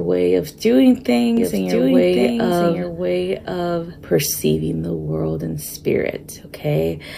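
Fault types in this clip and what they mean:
Doubled audio track: from 1.37 s to 4.83 s a second copy of the full-band sound runs about a second behind the original, somewhat quieter, around 5 dB down, with no reverberant tail or added room colour, and it cuts in and drops out abruptly at those points. The likely cause is the same signal being captured again through a slower path, or an edit leaving two copies overlapping out of step.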